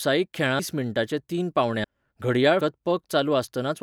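At 0.59, 1.84 and 2.61 s, compressed frames are skipped. Missing or rejected frames drop whole 32 ms blocks, so the speech jumps ahead by about 300 ms, half a second and 200 ms.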